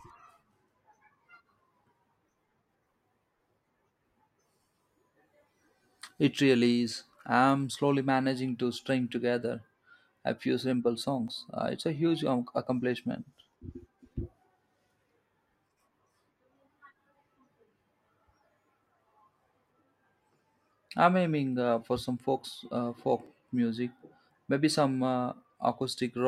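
The speech jumps slightly at 11.28 s and again at 23.26 s, most likely from audio missing between chunks: the recorder appears to handle the signal in blocks of about 6 s and drops a tiny slice, only a few milliseconds, each time it closes one block and starts the next. The two sides are butted together with no gap, so each point sounds like a brief skip in the speech.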